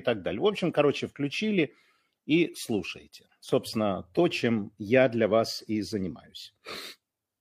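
No dropout, distortion, noise burst or timing error is audible anywhere in the recording.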